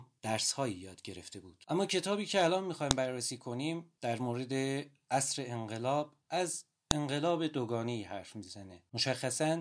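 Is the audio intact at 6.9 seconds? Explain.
No. At 6.91 s there is a sharp, loud click. This is a file header played as audio. A new piece of the recording begins there, and its WAV header was left in when the pieces were joined. Those few dozen bytes of file information are read as if they were sound samples. They form a brief burst of unrelated values that cuts across the speech as a snap, lasting only a couple of milliseconds.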